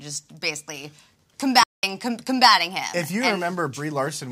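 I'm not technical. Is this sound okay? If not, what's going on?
No. There is a playback stall at 1.63 s: the sound stops abruptly in mid-flow and stays silent for about 0.2 seconds, until 1.83 s, then carries on. A gap that sudden, mid-sound, is the mark of the player itself pausing rather than anything in the recording. The likely cause is that the player briefly ran out of audio data, or was held up by something else on the system, and output nothing until it caught up.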